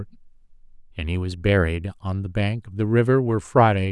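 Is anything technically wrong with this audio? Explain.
No, nothing is technically wrong with this audio.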